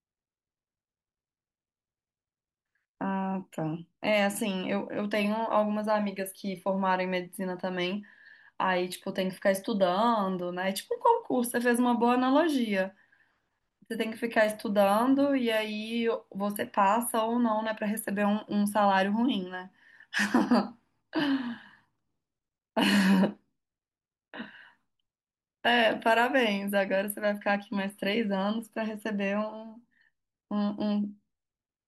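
No technical faults can be heard anywhere in the recording, and the signal holds steady and continuous throughout.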